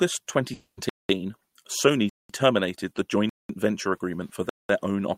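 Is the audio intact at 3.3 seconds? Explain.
No. A gap between chunks cuts in from 3.29 to 3.49 s, right after "terminated the" and before "venture agreement for". The audio arrived in chunks of about 1 second. A 200 ms silence sits at this join. It sounds like a short hole, though no sound is lost.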